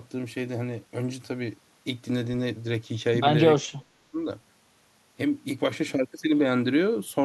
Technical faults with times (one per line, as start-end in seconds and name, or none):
3.66-4.23 speech suppressed in double talk